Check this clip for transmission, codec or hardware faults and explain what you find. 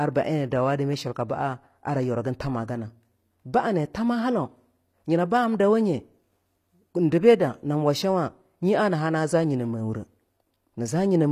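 One codec fault is present: the speech runs through HE-AAC compression for the whole clip. The encoder likely coded only the lower spectrum at a very low bitrate, consistent with something near 24 kbps, then synthesised the treble by copying lower bands upward under a coarse envelope. Because that rebuilt top end is not the original, its harmonics fail to line up, so s sounds come out gritty and lispy, with nothing at all above 14.9 kHz.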